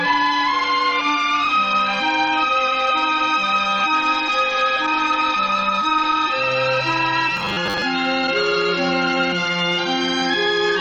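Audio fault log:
7.37 to 7.85 s, robotic sound from repeated short buffers: the sound turns into a rigid metallic buzz fixed at 100 Hz. This is likely the playback repeating a 10 ms slice of audio whenever new data came late, with roughly two fifths of the passage repeated rather than real.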